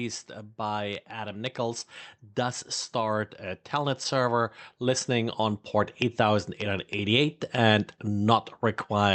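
From 0.56 to 7.34 s, automatic gain rising lifts the level by about 10 dB; the background swells with the speech, unlike a talker moving closer, through a call codec cutting off above 8 kHz.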